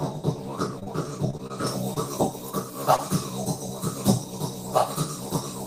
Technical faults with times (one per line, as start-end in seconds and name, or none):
0.79-0.88 short concealed packet loss
1.30-1.41 short concealed packet loss
1.47-1.52 short stall from a late packet
1.67-5.66 pre-emphasis left on
1.94-1.98 short concealed packet loss
2.96-3.00 short concealed packet loss